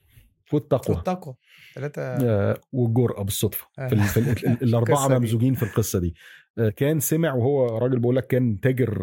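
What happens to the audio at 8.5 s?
Nothing goes wrong at 8.5 s: the speech continues intact through that moment, with no dropout, click, distortion or other fault.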